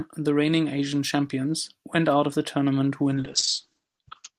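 Speech clip with a call bitrate drop from 3.15 s, right after "out of the tournament": the encoder's budget collapses, consistent with roughly 32 falling to 8 kbps, so the speech turns coarse and muffled, with the top end cut from 20 kHz to 8 kHz, until the clip ends.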